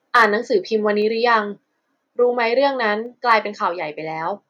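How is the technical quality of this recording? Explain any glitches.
Two short bursts of distortion mark the recording. Both sound like microphone overload. The first runs from 0.15 to 0.25 s, peaking about 4 dB over the limit. The second is briefer, from 3.31 to 3.33 s, about 2 dB over. The cause is likely an input gain set too high, so peaks hit the converter's ceiling and their tops are sliced flat. A few percent of samples get cut. Each spot has a harsh, crackling edge.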